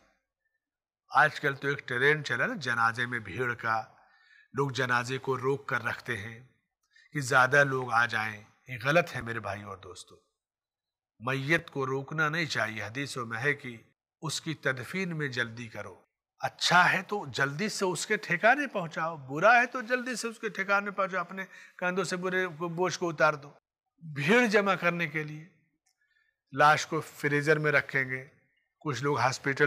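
At 9.21 s and again at 11.58 s there is a brief stutter, a tiny jumbled moment in the sound. Both are chunks out of order: a block of about 5.8 ms arrived one position late, so it plays after the block that should follow it. No audio is missing, but the swapped pair creates three hard joins in a few milliseconds, which makes the momentary scramble.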